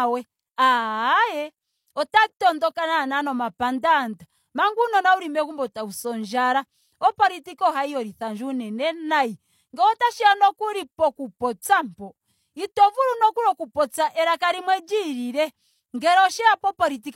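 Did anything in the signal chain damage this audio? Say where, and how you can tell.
Yes. Pre-echo at 2.10–2.13 s and 7.42–7.46 s points to the codec stage. A short hiss of 33 and 38 ms precedes each sharp onset, because quantisation noise sized for the loud attack spreads across the whole transform block into the quiet lead-in.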